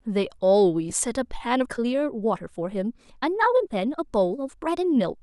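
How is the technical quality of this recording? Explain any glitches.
The speech has two technical problems: a brief dropout near the start and a sudden change of pace that lasts to the end. The light lossy compression underneath shows at most as a faint watery texture on noise and attacks.

At 0.90 s there is a lost LE Audio frame. The gap is about 10 ms, consistent with a single dropped LC3 frame over Bluetooth LE Audio. The decoder covers the hole by replaying the previous frame's spectrum with randomised phase signs, so what you hear is a tiny hiss-like smear rather than true silence or a hard click. That fill is what separates it from a plain dropout or a digital clip.

From 1.51 s to the end there is a time-stretched section. The pace jumps to about 1.62 times normal while the pitch stays put, which points to software squeezing the audio to fit a length, most likely by dropping short slices. 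That produces the rushed delivery. Unlike a sped-up tape or wrong sample rate, the voice does not rise in pitch or turn chipmunk-like.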